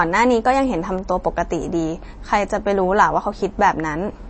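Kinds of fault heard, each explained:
MP3 compression: likely low-bitrate encoding, which fits about 32 kbps, leaving a flat spectrogram ceiling near 8.4 kHz and swirly, watery speech with blurred onsets.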